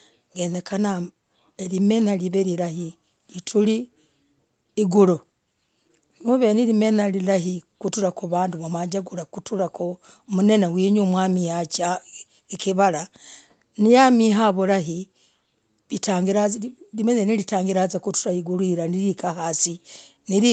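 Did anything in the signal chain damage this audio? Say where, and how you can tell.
No, nothing in the chain damaged this speech.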